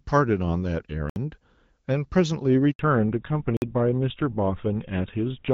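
Speech carried first over a wideband AMR-WB call, whose light coding sounds consistent with the 12.65 kbit/s mode, with several network and playback faults. At 1.10 s and again at 3.57 s, a block of digital silence occurs: the output buffer was likely left unfilled, so the sound cuts out to silence for about 65 ms and then 52 ms. At 2.71 s a handover gap appears as the call switches networks and no speech frames arrive, so the voice dies away and stays silent for 80 ms until the new link starts. Right after it, at 2.79 s, comes a fallback to narrowband. The call drops to an older codec, likely GSM full rate, and everything above 4 kHz is missing through the end, leaving the voice duller and rougher.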